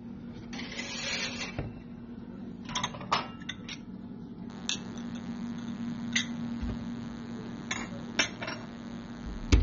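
From the very start, the whole clip is dull and smeared. Nothing reaches above about 7.6 kHz, so the top end is simply gone. Sustained sounds carry a warbling, fizzy texture. This is likely AAC compression. The damage is plainly audible and fits AAC-LC at a low bitrate, around 24 kbps. At that rate the encoder must discard detail. It lowers the cut-off and quantises the remaining bands coarsely, leaving gaps that come through as this watery smear.

At 4.50 s a thin, steady buzz starts. It runs to the end of the clip at 9.62 s. It repeats 100 times a second and carries a dense stack of harmonics, so it sounds edgy rather than like a low hum. It sits roughly 20 dB below the sound. This is DECT cordless phone buzz. A nearby DECT handset or base sends a short radio burst every 10 ms. The audio circuitry rectifies those bursts into this buzz.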